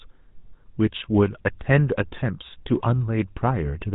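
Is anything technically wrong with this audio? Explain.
Yes. GSM full-rate codec coding runs throughout the speech. The vocal tract is modelled and excited by regularly spaced pulses that keep only a third of the excitation, which fits a 13 kbps full-rate coder. Nothing above 4 kHz survives, and a plainly audible buzzy, gravelly roughness colours the voice.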